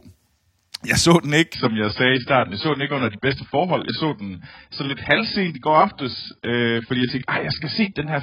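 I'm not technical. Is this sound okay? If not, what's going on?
No, not quite. From about 1.54 s to the end, this is an adaptive stream at a lower bitrate: the connection likely slowed, so playback switched to a much leaner version. The speech suddenly turns dull and muffled, with nothing above 5 kHz, and picks up a garbled edge, but with no break.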